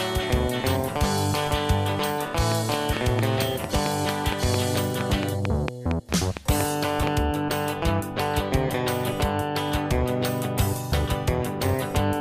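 From 2.52 s to 7.08 s, a train of clicks runs over the sound. Short pulses arrive at an even 4.4 per second, around twenty in all. Each click has much the same sharp shape. They stand well above the sound, peaking roughly 20 dB over it. They are heard as steady ticking, and they carry on through quieter gaps too. The likely source is electrical interference from nearby equipment or a faulty connection or power supply.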